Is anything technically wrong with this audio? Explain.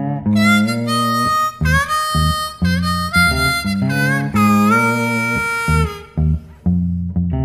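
No, the audio signal shows no technical faults anywhere in the clip.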